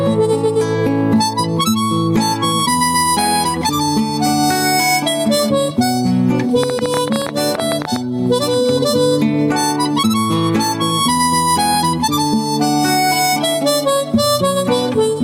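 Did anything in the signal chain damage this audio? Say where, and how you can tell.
Yes. Gain pumping runs through the whole clip at the input and limiting stage. Loud and soft parts are pulled closer in level, with a gain swing of around 10 dB. The likely cause is gain set far too high, with a fast limiter clamping every peak. Unlike a slow automatic gain control, the level tracks each loud sound almost instantly.

A train of clicks runs from 6.63 to 7.97 s. It has about twenty near-identical pulses at 12.8 per second, irregularly spaced and around 15 dB above the sound, and they are audible in the pauses too. This is likely interference in the analogue wiring or a faulty connection or power supply. Unlike dropouts, the clicks share one shape and remove no audio.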